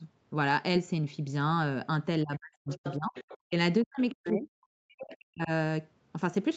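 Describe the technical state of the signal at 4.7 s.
At 4.7 s the speech sits inside a stretch of suppression running from 3.83 to 5.5 s. It is likely speech suppressed in double talk. When both ends of a call are active, an echo canceller can mistake the near talker for loudspeaker echo and attenuate both. Here the level dips in pieces, falling by about 40 dB at its deepest, across roughly one and a half seconds in total. The audio above 8 kHz is absent throughout.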